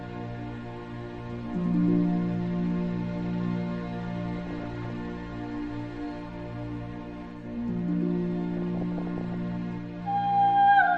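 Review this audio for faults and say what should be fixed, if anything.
DAB burbling at 4.36–4.90 s and 8.54–9.53 s: with roughly half a percent bit errors, corrupted MP2 sub-band samples and scale factors make narrow bands jump in level for up to a frame, adding short blips of noise. Better antenna placement or stronger reception prevents it.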